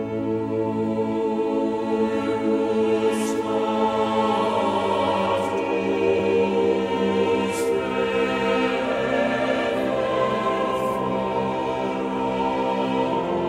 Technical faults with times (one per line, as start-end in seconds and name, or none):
6.18 compressed frames skipped